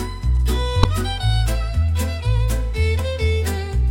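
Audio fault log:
0.82 to 0.85 s and 2.99 s: damaged data in a compressed stream. At both points, part of the encoded bitstream was corrupted. The decoder could not interpret those frames correctly, lost its place in the stream, and scanned forward for the next valid frame header. The first event lasts about 36 ms. The second is a brief blip of only a few milliseconds.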